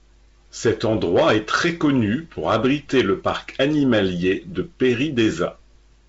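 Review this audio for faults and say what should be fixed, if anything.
Nothing in this clip needs fixing. The speech has the character of G.722 wideband telephone coding at 56 kbit/s, with nothing above 7.7 kHz and light coding roughness.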